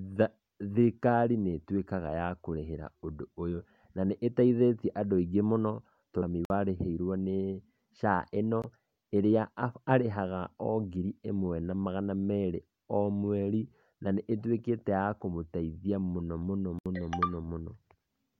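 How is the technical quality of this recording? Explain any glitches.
The speech carries three audible dropouts. Blocks of digital silence appear at 6.45 to 6.50 s (51 ms), at 8.62 s (18 ms) and at 16.79 to 16.86 s (70 ms). In each, a run of samples drops to silence, the kind of gap left when an output buffer isn't filled in time. The signal cuts out and back with no fade: a very short hole at 8.62 s and short holes at the other two.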